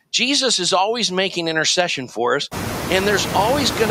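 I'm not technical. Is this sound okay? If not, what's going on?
No. There are noise suppressor artifacts for the whole clip. A noise suppressor is a filter that tries to turn down steady background hiss. Here it barely does anything. The background is lowered only a tiny amount, so the noise is still plainly there. This shows most after about two and a half seconds, when the room noise gets much louder and sits only a little below the speech. The suppressor does not hold that rise back.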